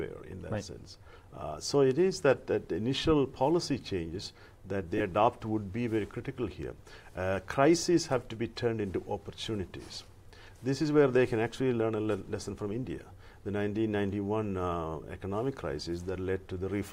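Lost LE Audio frames at 4.98 to 5.00 s: a gap of about 22.5 ms, consistent with three missing frames, was concealed by the decoder replaying the last spectrum with randomised phase signs, so the sound briefly turns into a short, noisy smear instead of dropping out.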